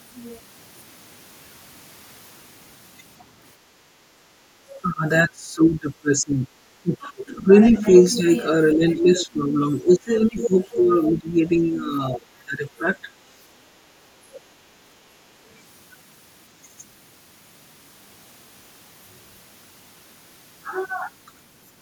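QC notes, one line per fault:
3.59–4.54 s, background gated by the echo canceller: the room tone sinks by up to about 9 dB, in dips adding up to roughly half a second, then recovers. The canceller clamps the microphone while the far end plays and releases when it stops. On a waveform the noise floor visibly thins out. On a spectrogram the broadband background fades to a paler band across this span, then fills back in.
4.82–13.08 s, speech suppressed in double talk: the talker's level repeatedly collapses, by as much as roughly 20 dB, for about five seconds in total within this stretch. The sound dips, dulls and cuts out in pieces. The likely cause is the canceller failing to tell near speech from loudspeaker echo while both sides talk, so it turns both down. The waveform shows a ragged, notched envelope. On a spectrogram the harmonics break into gaps, and the upper bands thin out.
7.96–8.05, 8.9–9.26, 10.43–10.8 and 14.34–14.39 s, other side's voice leaking through: four short scraps of a second voice break through. 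The scraps at 7.96 s and 10.43 s sit roughly 10 dB under the talker, the one at 8.9 s around 15 dB under and the one at 14.34 s about 25 dB under. This is likely echo from the loudspeaker that the canceller did not fully remove. On a spectrogram each scrap shows faint, separate harmonic traces that do not line up with the main voice. On a waveform they appear as small bursts.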